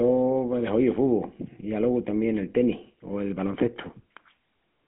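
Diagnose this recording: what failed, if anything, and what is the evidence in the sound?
The speech has passed through a GSM full-rate codec, a codec-stage fault present for the whole clip. The sound is narrow, confined to roughly a 150 Hz to 3.4 kHz line band, with plainly audible buzzy, gravelly roughness consistent with a 13 kbps full-rate coder. The codec models the vocal tract and drives it with a coarse, regularly spaced pulse excitation, which produces the grit. On a spectrogram, nothing appears above 3.8 kHz, and the harmonics look smeared and rough.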